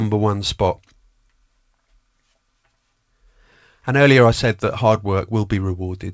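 No technical faults can be heard in the speech: the audio has come through a call path whose band stops at about 8 kHz, which fits a wideband codec such as G.722, and nothing in the signal breaks, drops out or changes character along the way.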